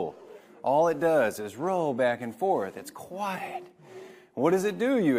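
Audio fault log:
No faults detected in this clip.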